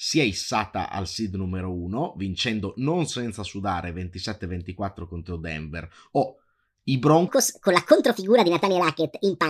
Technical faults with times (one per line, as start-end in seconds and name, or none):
7.28-9.49 wrong sample rate